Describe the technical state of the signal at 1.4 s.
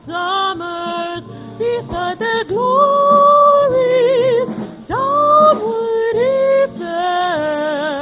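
At 1.4 s the signal is intact, with no audible dropout, distortion or other technical fault at that point.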